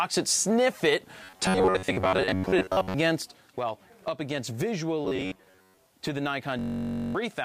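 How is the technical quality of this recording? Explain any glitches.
The recording has clear technical faults: two bursts of robotic buzzing, a stereo channel that drops out for the last few seconds, and a buzzing hang loop near the end.

Robotic sound from repeated short buffers occurs from 1.23 to 2.94 s and again from 5.05 to 5.77 s. The likely cause is new audio arriving too slowly, so the playback software fills the gaps by replaying the last small piece it holds while fresh material is skipped. Most of the sound in these stretches is repeated material. The repeats impose a fixed buzz at 93.8 Hz, matching pieces about 10.7 ms long, which gives the sound a rigid, metallic quality.

One channel drops out from 3.22 s to the end. The likely cause is one side of the stereo stream being lost, so everything shared by both channels falls abruptly by about 6 dB once they are summed to mono. 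Anything carried only in the missing channel vanishes entirely.

A system hang loop runs from 6.59 to 7.15 s. The computer or driver froze while the audio hardware kept cycling through its ring buffer, replaying the same 21.33 ms slice 26 times at a 46.9 Hz rate. That slice length fits a 1024-sample buffer. About half a second of real audio is lost and replaced by a steady buzz at the loop rate.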